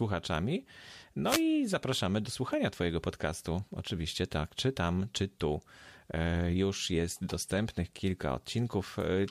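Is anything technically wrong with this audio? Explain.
Yes. From 1.25 to 1.43 s, just before "zapraszamy do słuchania", there is a wireless microphone noise hit: the FM radio link faded as reflected signals cancelled, so receiver noise rose over the speech, heard as a short burst of static lasting about 0.18 s.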